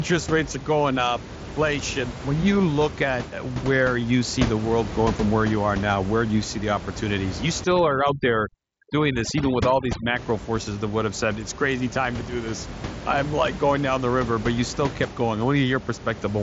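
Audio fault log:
7.64–10.16 s, overdone noise removal: noise reduction set too strong cuts bands near the noise estimate, leaving twinkling specks and losing quiet parts of the speech before "forces that would have".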